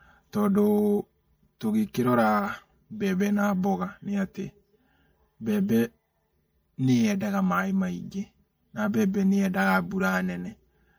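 From the first second to the last, the speech has a hollow, phasey colour with notches that stay fixed in frequency. That is channel delay (comb filtering): one channel runs late by around 5 ms before the two are summed to mono, so shared content cancels at evenly spaced frequencies from roughly 100 Hz upward. Unlike a moving phaser, the notches never sweep.

Throughout, the audio also carries plainly audible watery, swirly artefacts, with metallic chirps on s sounds and smeared attacks, likely from MP3 compression at a bitrate around 64 kbps. Weak frequency lines drop in and out from frame to frame. That flickering sets it apart from the static notches of the comb filtering.

At 1.93 s there is pre-echo, a short hiss of about 14 ms just ahead of a sharp attack, which sounds softened. The codec spread its quantisation noise across a whole block, so noise sized for the loud onset leaked into the quiet moment before it. 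Unlike a click, it builds up before the attack rather than landing on it.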